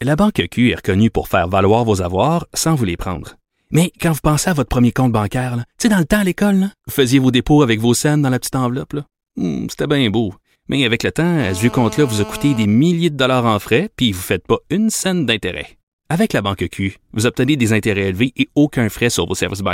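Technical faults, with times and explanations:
11.39–12.65 s, GSM phone buzz: a nearby 2G phone on a call transmits in bursts 217 times a second, and the audio circuitry rectifies them. After "avec le temps" a steady, raspy 217 Hz buzz full of harmonics sits about 15 dB below the speech, ending before "milliers de dollars en".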